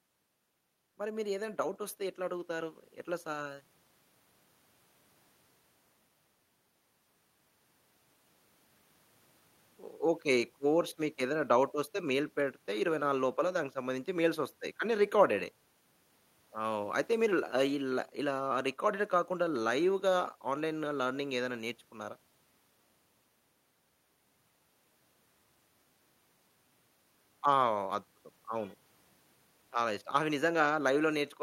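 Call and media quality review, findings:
Automatic gain rising, 0.97–3.7 s. Speech and background noise floor swell together, about 9 dB over roughly 2.7 s. Probable component: AGC on the capture path, reading input as too quiet and ramping gain. Waveform: envelope widens steadily across the span. Spectrogram: whole band, noise included, brightens in step.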